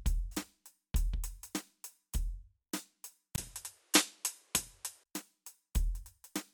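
At 3.36 s the recording's input likely switched to a poorer device, a different capture path with a narrower band and its own gain and noise floor. The music drops out for about 20 ms, then returns duller, with nothing above 12.3 kHz, a level shift of around 5 dB, and a new background noise roughly 40 dB below the music. At 5.06 s the original input returns and the top end clears again.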